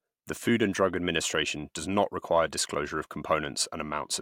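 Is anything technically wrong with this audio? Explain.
No, nothing in this speech recording points to a technical fault. The signal chain does nothing audible to the sound at any point in the clip.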